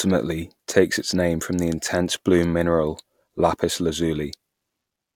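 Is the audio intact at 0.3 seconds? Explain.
Yes, at 0.3 seconds the speech carries through cleanly, with no dropout, click, distortion or other fault at that moment.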